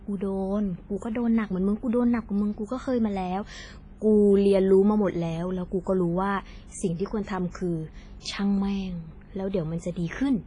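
Speech that sounds washy and ringing throughout, with hiss breathing alongside it and nothing above 10.3 kHz, likely from WMA compression at a low bitrate, around 24 kbps.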